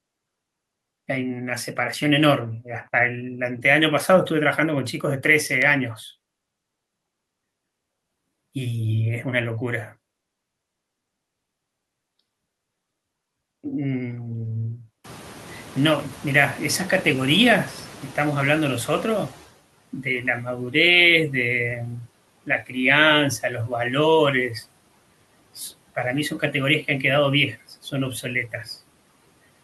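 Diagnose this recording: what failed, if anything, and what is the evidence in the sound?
The failure is in call processing, where the noise suppressor is catching up. Room noise jumps by about 25 dB around 15 s. From 15.04 s the louder background passes with little reduction. The suppressor's noise estimate lags the sudden rise. Over about 4.4 s it adapts, and by 19.47 s the noise has sunk by about 11 dB. It then sits about 21 dB below the speech. The rise itself is real room noise, but the slow fade is the fault.

The same stage produces speech cut by the noise suppressor between 22.46 and 22.76 s. Parts of the speech there sound swallowed and faint. The level dips by about 12 dB at its deepest, over roughly 150 ms in total. The suppressor mistook that low-level speech energy for background noise. It applied its noise gain reduction to the speech as well, so quiet detail was turned down along with the room noise.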